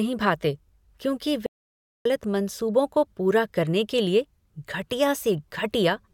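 At 1.46 s the speech drops out to dead silence until 2.05 s, roughly 0.59 s gone with no room tone at all. That's an audio dropout to silence, likely a lost input while silence kept being written.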